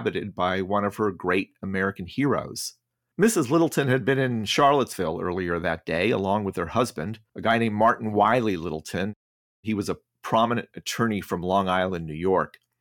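From 7.47 to 8.35 s, hard clipping flattens speech peaks that reach the stage's ceiling with no overdrive margin, adding brief high-frequency crackle on loudest syllables.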